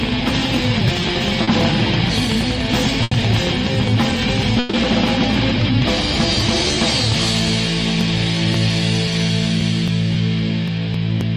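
At 1.43 s a short concealed packet loss leaves about 40 ms of audio missing. The receiver covers the hole by extending the preceding sound and then blending back into the real signal, so it comes across as a brief smear or wobble rather than a dropout. On a spectrogram the harmonics or noise simply stretch flat across that sliver. On the waveform the span looks smoothly repetitive instead of varied.

Longer holes follow as bursts of packet loss, at 3.03 to 3.13 s (about 80 ms) and 4.59 to 4.75 s (about 140 ms, with no silence at all). In each, several consecutive packets arrived too late or not at all. The concealment keeps continuing the last sound while turning it down, so it becomes a fading held buzz or hiss, and the audio resumes later with the intervening part gone. A spectrogram shows frozen horizontal bands decaying in level. The waveform shows a repeating, tapering envelope ending in an abrupt jump.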